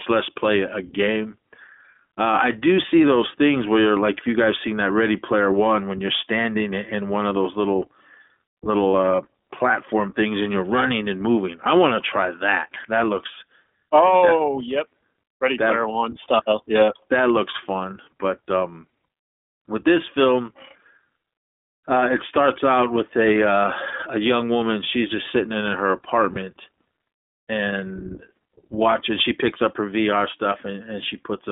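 Throughout, the speech was carried by the iLBC codec, which codes every 20 ms frame on its own. Its band runs from 250 Hz to 3.6 kHz, and the coding leaves a plainly audible rough, synthetic edge.

Lost iLBC frames occur at 8.92–8.95 s, just before "uh platform things and", and at 26.34–26.38 s, just after "just sitting in her". Each time the decoder repeated the last pitch cycle mixed with noise, heard as a brief held, buzzy or breathy vowel. Each gap fits a single lost 20 ms frame, and the voice comes back almost at once.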